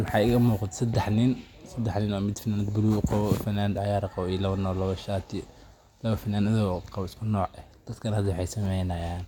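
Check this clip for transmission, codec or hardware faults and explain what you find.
Checking this clip turns up no faults to explain.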